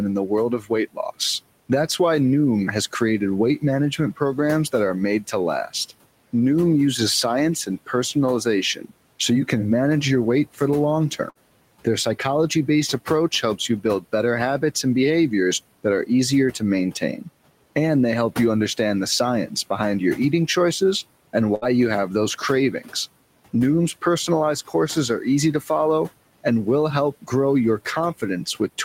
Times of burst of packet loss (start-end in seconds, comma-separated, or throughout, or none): 11.29-11.38, 21.55-21.65